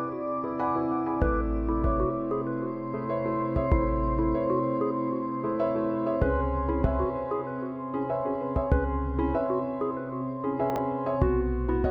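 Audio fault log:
10.70–10.78 s, chunks out of order: one 20 ms chunk was delivered three chunks late and played after the audio meant to follow it, so this 80 ms stretch sounds briefly jumbled, with three hard joins where mismatched waveforms meet.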